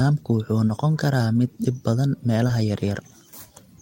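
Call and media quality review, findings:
Short concealed packet loss, twice: brief smeary wobble at 0.67–0.71 s, same again at 2.47–2.51 s. About 20 ms of audio never arrived in time each go. Receiver's jitter buffer/decoder concealment papered over it by stretching the last bit of sound, then cross-faded back into the real stream. Worth checking the network leg for loss around those spots.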